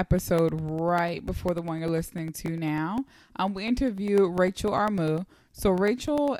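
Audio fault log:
0.09–6.28 s, periodic USB or driver dropouts: a steady tick every 0.1 s, around seventy of them, each a tiny gap of roughly a millisecond filled with silence. Something's stalling the USB bus or driver on a fixed cycle, so the speech gets punched with evenly spaced holes you hear as a regular ticking.
2.46 s, dropped buffer (overrun): a small jump forward in the speech, about 4 ms of audio simply missing and the edges butted together, no silence between. Likely the software fell behind and the hardware overwrote a buffer before it was read.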